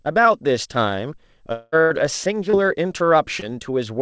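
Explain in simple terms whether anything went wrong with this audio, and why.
Long network dropout, 1.52 to 1.75 s: for about a fifth of a second the sound turns into a fading buzz-like continuation rather than going silent, then picks up further along with that stretch missing. The likely cause is a gap where no audio arrived, so the receiver kept stretching the last sound it had.

Burst of packet loss, 1.81 to 1.93 s: shortly afterwards, about 90 ms of audio is lost. The receiver carries the last sound on and lets it fade, so you hear a brief held buzz or hiss, then the audio resumes with that piece gone.

Short concealed packet loss, at 2.50 s and 3.40 s: each time about 30 ms never reached the decoder in time. The receiver patched the hole by extending the previous sound and blending back in, which comes across as a tiny smear or wobble, and a quick consonant could disappear.

The call's G.722 codec carries nothing above 8 kHz, which takes away the highest frequencies.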